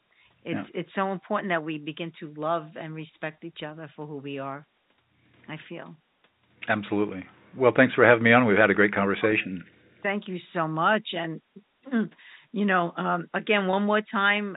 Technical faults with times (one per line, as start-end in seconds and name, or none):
9.31 packet loss with pitch repetition
13.71 packet loss with pitch repetition